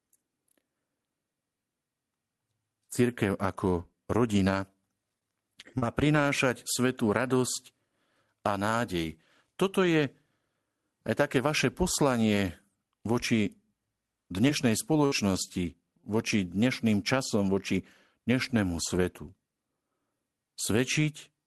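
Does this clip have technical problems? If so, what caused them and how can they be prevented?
Yes, there are scattered short gaps in two stretches: 5.09 to 6.16 s, with about four small holes and the longest around 40 ms, and 14.43 to 16.16 s, with about three and the longest around 70 ms. Packets went missing or arrived late, and the receiver covered each hole by stretching the last bit of sound, so you hear brief ticks and smeared hiccups. The call codec's top end stops around 12 kHz, which fits Opus at a modest bitrate. To prevent the gaps, use a steadier network path or a larger jitter buffer, plus in-band FEC.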